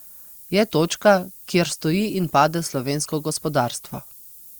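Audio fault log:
throughout, low bit depth with noise shaping: a steady, thin hiss sits only about 20 dB below the speech and climbs sharply toward the top of the band. That fits an 8-bit signal whose rounding error is pushed upward. Plain truncation would sound grittier and mid-band.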